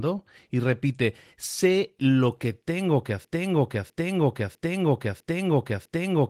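From 3.25 s, after "lo que tengo que", a 0.65 s fragment repeats five times to the end: a broken-record loop, likely from a stalled stream.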